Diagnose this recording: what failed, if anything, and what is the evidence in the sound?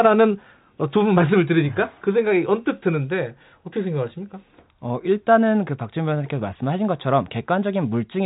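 Nothing failed: the speech is band-limited with no content above about 3.8 kHz, which is consistent with normal G.711 A-law telephone coding rather than any fault.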